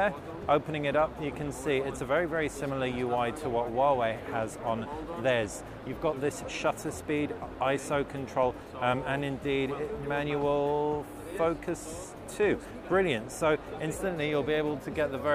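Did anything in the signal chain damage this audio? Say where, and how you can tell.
No, nothing along the signal chain has audibly damaged this audio at any point in its run.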